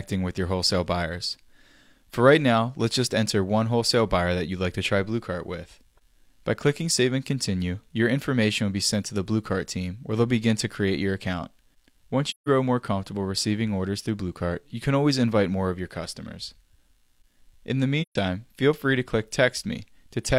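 AAC frame loss with muting at 12.30–12.48 s and 18.02–18.16 s: zeroed frames fade into soft-edged gaps, seen as blank spectrogram columns and tapered waveform holes.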